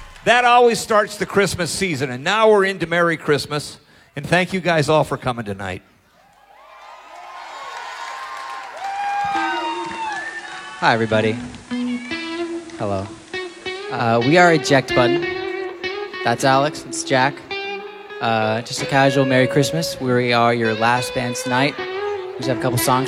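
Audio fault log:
9.45 to 14.11 s, digital radio blending to analogue: the receiver lost its digital stream and cross-faded over about 0.36 s to the station's FM broadcast, then came back the same way. While it's on FM you can hear a soft hiss sitting roughly 30 dB under the programme, and the level dips by about 1 dB, so the whole stretch sounds a touch quieter.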